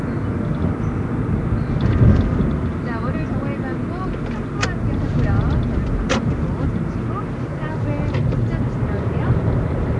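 From start to finish, a low bit depth with dither lays a constant, even hiss about 35 dB below the sound, which fits roughly 9-bit samples. The rounding error has been turned into steady white noise, so unlike undithered truncation it never crackles or distorts on quiet passages.

Throughout, the sound is coloured by what is likely Nellymoser compression, at a rate that points to about 44 kbps. Nothing passes above 10.6 kHz, and starved bands are filled with noise, giving a rough, shifting halo and a smeared, underwater blur, unlike the dither hiss, which stays uniform.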